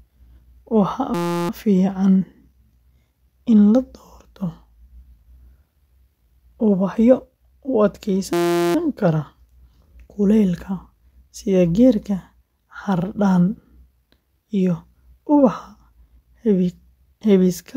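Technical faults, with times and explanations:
1.14–1.49 s and 8.33–8.75 s, system hang loop: The computer or its driver stalled twice while the sound hardware kept replaying the same tiny stretch of its ring buffer. Each loop lasts 5.8 ms, which fits a 256-sample buffer. Repeating that often produces a steady buzz at about 172 Hz, lasting 0.35 s and then 0.42 s. Normal speech resumes afterwards, with little or no audio missing.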